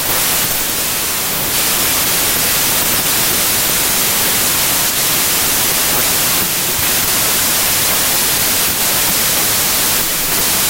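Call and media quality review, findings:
Wrong sample width, whole clip: packed 24-bit samples decoded as 32-bit, mismatching bytes. Heavy noise buries the speech, which plays about 1.33 times fast and high.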